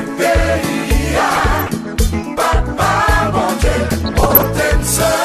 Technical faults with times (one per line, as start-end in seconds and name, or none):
1.29-1.70 DAB burbling
3.89-4.61 DAB burbling